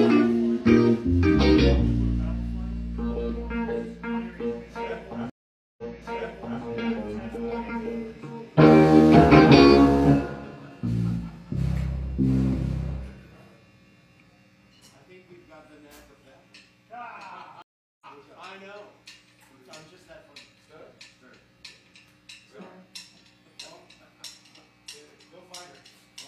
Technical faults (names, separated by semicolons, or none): stream reconnect